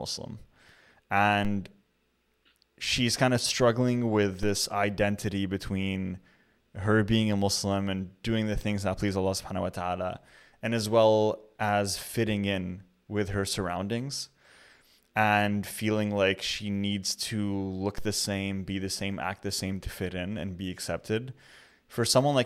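A DC step shifts the zero line by about -25 dBFS from 1.45 to 4.43 s, ending just before "identity between", and again from 17.98 s; each jump lands as a low thump beneath the speech.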